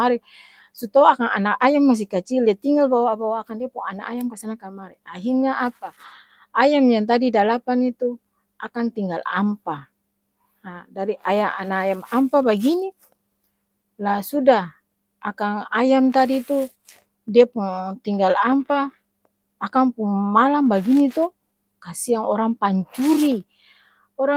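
No technical faults can be heard in this clip.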